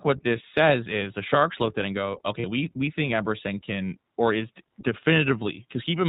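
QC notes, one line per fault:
throughout, iLBC codec: The speech is cut off above 4 kHz and has a slightly rough, synthetic edge that is plainly audible on every phrase. The roughness fits iLBC's 15.2 kbps mode with 20 ms frames coding each block of excitation on its own. That sets it apart from a simple low-pass filter, which would dull the sound without adding this rough, synthetic texture.
2.40–2.45 s, lost iLBC frames: Between "at it and go" and "we we think", a 40 ms stretch turns into a held, faintly buzzy vowel-like tone. The decoder filled the gap by repeating the last pitch cycle blended with noise, which fits two lost 20 ms frames. A plain dropout would leave silence or a click instead. Because iLBC frames stand alone, the speech comes back clean straight away, with no smeared recovery afterwards.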